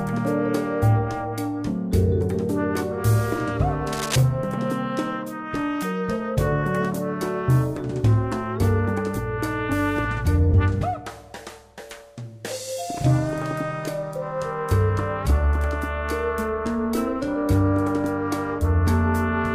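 From 3.92 to 4.16 s, a burst of cable scratch noise sits over the sound for about a quarter of a second, only a few decibels below it. It is likely a worn cable or connector being moved, its contact resistance flickering and injecting dense, irregular noise. Unlike isolated clicks or a digital dropout, it is a continuous rustling scrape with no gap in the underlying signal.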